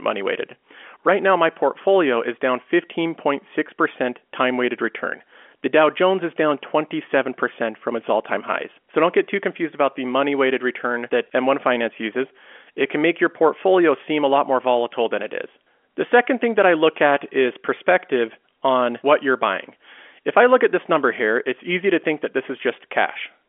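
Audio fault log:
No faults found; the speech sits in a 250 Hz to 3.4 kHz telephone band with nothing above 3.7 kHz, as expected of G.711 telephone coding working normally.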